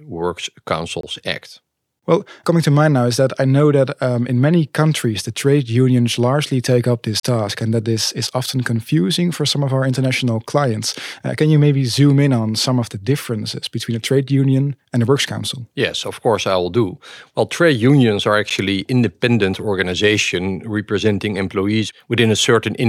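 At 1.01 to 1.03 s, 7.20 to 7.23 s and 18.50 s the speech drops into a block of digital silence, each cut hard with no fade. Lengths of 23, 35 and 12 ms suggest unfilled output buffers, fitting 1024- and 512-sample blocks.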